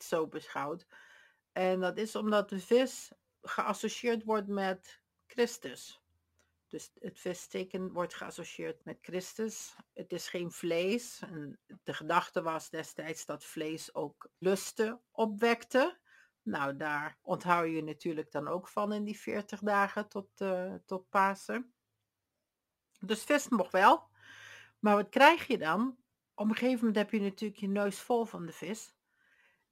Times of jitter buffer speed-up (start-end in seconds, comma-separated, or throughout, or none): none